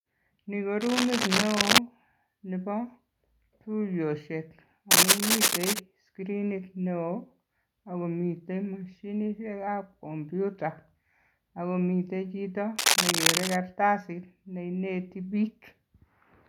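Cable scratch noise breaks over the speech three times, from 0.81 to 1.78 s, 4.91 to 5.80 s and 12.76 to 13.56 s, each burst lasting just under a second and sitting roughly 5 dB above the speech. The likely cause is a worn cable or connector being moved, its contact flickering and spraying ragged noise into the signal. Unlike a steady hiss or isolated clicks, each burst is a dense, uneven scratching rustle over the speech for a moment.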